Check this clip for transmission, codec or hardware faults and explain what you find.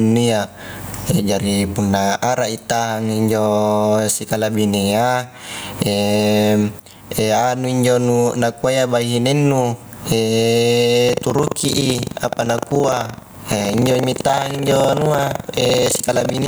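Two faults are present in this speech clip.

Gain pumping runs throughout. The gain swings by about 20 dB. Loud and soft passages sit close in level, so the speech sounds squashed. The likely cause is gain set far too high, with a fast limiter clamping each peak.

Buffer tearing starts at 11.05 s and continues to the end. A robotic rattle at 23.4 Hz rides on the speech, present only while sound is playing. That rate fits a 2048-sample buffer. Writer and reader have drifted, so a small slice of each period, roughly 15 percent, replays audio about a tenth of a second old, with hard joins on both sides.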